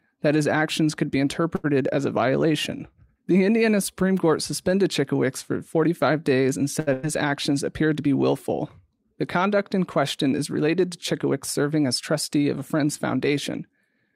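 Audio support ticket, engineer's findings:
Sample clock jitter, whole clip. Fine hiss/roughness riding on the speech, heavier on loud passages and sibilant, high-frequency content, absent in pauses. Error sits roughly 50 dB below signal, from timing wander well under a microsecond. Component: ADC/DAC clock. Sampling instants drift early/late, so the error scales with waveform slope, and steep high-frequency edges suffer most.

Short stall from a late packet, 1.55–1.66 s and 6.80–6.89 s. Speech held/stretched for 84 ms and 71 ms respectively, faint buzz or dip on the held sound, nothing dropped. Component: jitter buffer / receiver concealment. Packet late, buffer ran dry, last sound extended until arrival, playback resumed from the same point. Each stall adds its length to end-to-end delay.

Burst of packet loss, 6.93–7.05 s, directly after the second stall. Roughly 100 ms of speech missing. 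The gap is filled by a held buzz or fading hiss decaying in level, then audio jumps ahead. Component: network path / receiver PLC. Consecutive packets lost or too late to play; concealment repeated and attenuated the last sound across the gap.

Jitter buffer speed-up, 11.13–12.14 s. Speech runs hurried, about 6% fast, pitch unchanged. Roughly 70 ms trimmed over that second. Component: jitter buffer adaptation. Buffer over target depth, likely after the earlier late packets arrived bunched; receiver cut short pitch-period-sized chunks repeatedly to pull latency back down.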